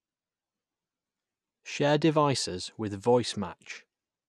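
From 0.88 to 1.80 s, just before "devices with", the speech carries a filter restarted on every block. A filter stage is losing its memory at each block boundary. Every block starts again from silence, so each one opens with a small transient. These repeat 25 times a second, one every 40 ms. Together they form a low buzz under the speech. It grows louder and softer with the speech level.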